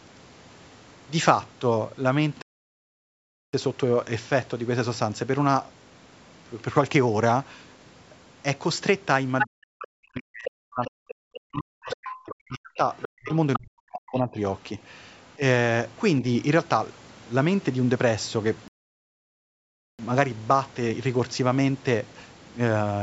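At 2.42 s the speech cuts to silence in mid-flow and stays silent for 1.11 s, until 3.53 s, before carrying on. This is a playback stall: the output had nothing to play for that stretch, most likely because the player's buffer ran dry or its thread was held up, so the sound simply stops rather than fading or glitching.

From 9.39 s a second voice starts breaking through in short scraps. The first, at 9.39 to 9.47 s, is roughly as loud as the main speech. Quieter ones, around 10 to 15 dB below it, follow at 10.45 to 10.50 s, 10.85 to 11.39 s, 11.84 to 12.14 s and 12.98 to 13.58 s. This is the other side's voice leaking through: their audio, played out of the talker's loudspeaker, is picked up again by the microphone, and the echo canceller likely failed to remove all of it.

Over the same stretch, 9.44 to 14.37 s, the main speech keeps dipping and cutting out in pieces, sometimes falling by something like 40 dB, for roughly 4 s in total. 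This is speech suppressed in double talk: with both sides talking at once, the echo canceller likely could not tell the near voice from the loudspeaker echo and turned both down.

At 18.68 s a second playback stall silences the sound for 1.31 s, until 19.99 s, and it then resumes.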